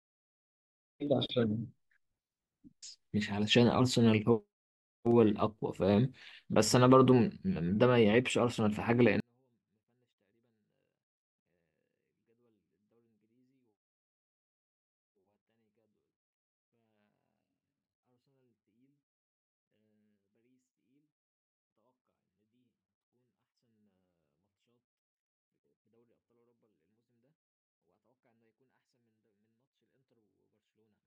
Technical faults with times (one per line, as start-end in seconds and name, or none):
9.20-31.07 24-bit alignment error (too quiet)